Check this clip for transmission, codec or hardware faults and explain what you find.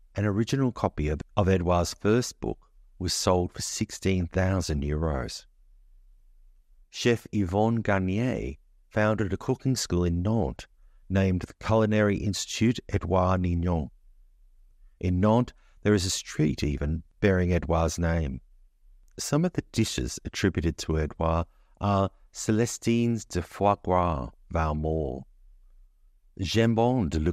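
DAB burbling occurs four times in this speech, at 4.20–4.24 s after "book was sold for", at 8.45–8.55 s, at 18.24–18.43 s, and at 24.28–24.34 s after "de foie gras". Weak reception lets a small fraction of bit errors slip past correction and corrupt the MP2 sub-band data, producing short blips of noise in single sub-bands. On a spectrogram, isolated frequency bands flare briefly as blocks.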